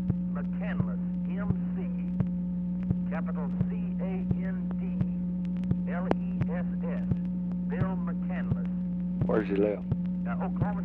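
Nothing here calls for comment, since the audio runs its whole course without any technical fault to point to.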